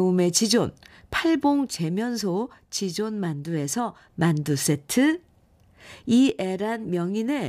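At 1.70 s the speech falls abruptly by about 6 dB. It stays low until 4.10 s. It drops again at 6.29 s and stays down to the end. The likely cause is one channel drops out, halving what both channels shared in the mono sum.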